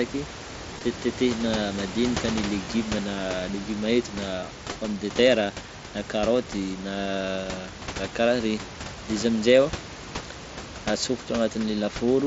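Concealed Bluetooth headset packet loss at 0.75–0.81 s, 2.65 s after "madinika ny", and 4.73 s between "légume eto na" and "pomme de terre na": lost packets are patched from recent waveform, leaving brief buzzy smears.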